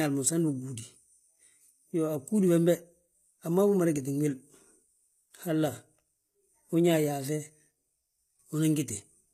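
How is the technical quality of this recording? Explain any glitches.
The speech has plainly audible codec damage for its whole length, and nothing reaches above about 14.9 kHz. The upper range sounds bright but synthetic. Sibilants come out gritty and lispy, with a metallic sheen. That points to HE-AAC compression as the likely cause, at a very low bitrate, something in the region of 20 kbps. At that rate the codec spends its bits on the lower band and fakes the treble by copying lower bands upward under a coarse envelope, so the harmonics don't line up across the crossover, and that mismatch is the grainy edge you hear on every s.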